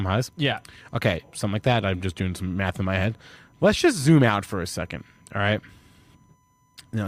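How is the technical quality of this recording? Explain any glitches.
The recording carries one fault, present from start to finish. Current drawn by the USB bus in one-millisecond frames is leaking into the audio through the power or ground, producing USB whine: a steady 1 kHz tone of fixed pitch, roughly 45 dB below the speech, heard as a faint high whine beneath it throughout.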